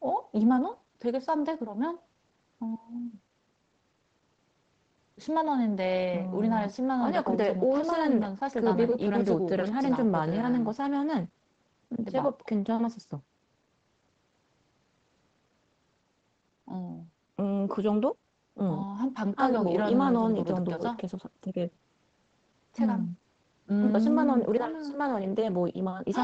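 No faults are audible: the speech stays within an 8 kHz band, as expected from the call's microphone processing and wideband codec, and nothing else stands out.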